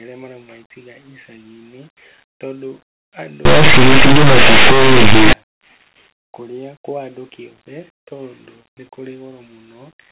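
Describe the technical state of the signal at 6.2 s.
At 6.2 s the speech signal is intact, with no fault present.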